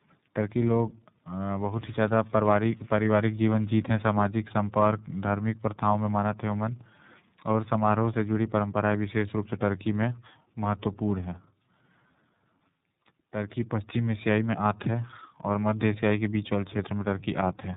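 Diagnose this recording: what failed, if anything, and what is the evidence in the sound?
Tandem speech coding at the codec stage, running through the whole clip. The speech is band-limited, with nothing above about 3.8 kHz, and sounds rough, muffled and warbly. The artefacts point to two low-rate speech coders in a row, one like AMR-NB and one like iLBC, joined by a G.711 hop. Each link decoded the call and coded it again. The second coder had to model the first one's errors, so the distortions stacked.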